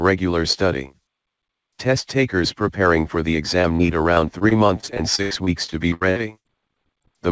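From 3.62 s to 7.06 s there is repeated packet loss, giving a robotic sound. The audio drops out in 23 gaps, the longest 86 ms. Each hole is patched by stretching the last sound, so about 17 percent of that stretch is concealed. It sounds choppy and broken. Throughout, nothing reaches above 8 kHz, which fits a G.722 call codec.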